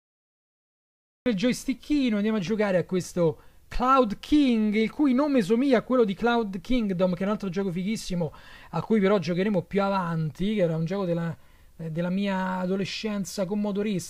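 The audio has a cut-off start: about 1.26 s of dead digital silence, then the sound jumps in mid-stream with no attack or fade, so capture clearly began late.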